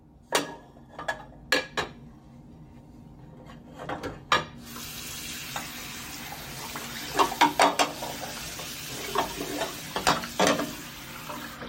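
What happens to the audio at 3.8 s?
Nothing goes wrong at 3.8 s; the sound carries on intact through that moment.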